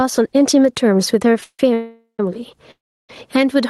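Gain pumping runs through the whole speech clip, with a gain swing of around 10 dB. The likely cause is gain set far too high, with a fast limiter clamping down on peaks.

Call audio freezes occur at 1.44–1.60 s, 1.74–2.20 s and 2.71–3.10 s. Each time the sound stalls into a fading continuation of the last sound, then silence, longest in the third, before resuming where it stopped. Nothing is lost, but the pauses push the speech later. This is likely from delayed packets draining the jitter buffer.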